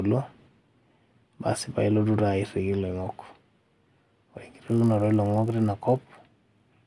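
From 3.32 s to the end, the speech carries a buzz at 50 Hz. This is a resampler restarted on every block: each 20 ms block was converted from 48 kHz to 24 kHz in isolation, leaving an edge error at every boundary. A spectrogram shows evenly spaced vertical lines during voiced passages.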